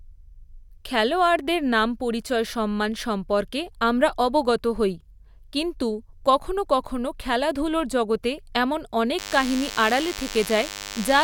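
From 9.18 s to the end at 11.23 s, right after "কখনও খেলাধুলোর জগতে এমন", a thin, steady buzz rich in harmonics sits about 10 dB below the speech. This is DECT cordless phone buzz: a nearby handset or base station's radio bursts every 10 ms are rectified by the audio circuitry, producing a 100 Hz buzz.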